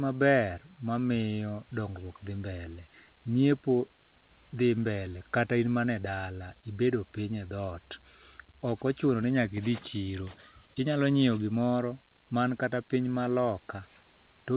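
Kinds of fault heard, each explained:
Nothing stood out on listening to the speech in this recording.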